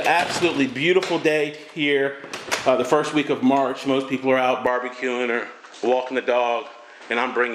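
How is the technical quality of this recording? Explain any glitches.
The quality drops partway through. From 4.67 s to the end, the sound turns duller, with nothing above 8.4 kHz. The likely cause is an input switched to a poorer device with a narrower band. There is no gap at the switch, and the level stays about the same. A new background noise appears, roughly 30 dB below the signal.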